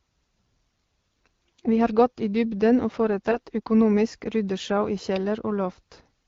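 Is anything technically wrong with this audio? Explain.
Yes. The speech runs through AMR-WB wideband coding, which sounds consistent with the 12.65 kbit/s mode, and one stretch is damaged by AMR bit errors.

From 3.31 to 3.39 s, right after "gått i dybden og", the sound turns briefly hoarse and gargly while its pitch and loudness hold. Roughly 4 percent of the weakly protected bits flipped across about four 20 ms frames, so excitation pulses and fine spectral values decode wrongly. A spectrogram shows smeared, noisy harmonics in that 80 ms band, with a ragged but steady-level waveform.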